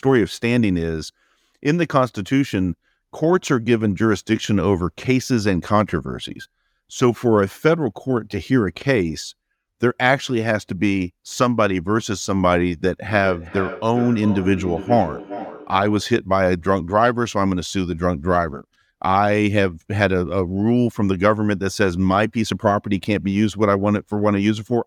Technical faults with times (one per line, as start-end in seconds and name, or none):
13.09-16.17 feedback echo between two devices